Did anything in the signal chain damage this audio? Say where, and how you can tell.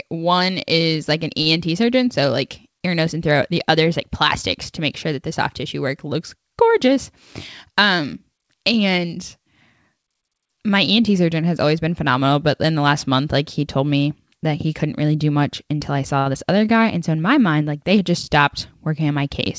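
Yes. At the network and jitter-buffer stage, there are short stalls from late packets at 1.42 to 1.47 s, after "is like an", and at 16.19 to 16.27 s, after "do much until I". The last sound is stretched for about 39 ms and 66 ms, then resumes intact. Nothing is skipped, unlike loss.

There is short concealed packet loss at 16.33 s. About 30 ms of audio never arrived and was replaced by a brief continuation of the preceding sound, heard as a quick smear or wobble. Unlike the stalls, real material is missing here. The G.722 call codec limits everything to below 8 kHz.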